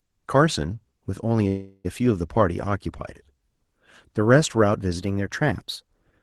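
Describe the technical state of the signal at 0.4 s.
At 0.4 s the speech is intact, with nothing beyond the ordinary coding character of the call path it travelled through.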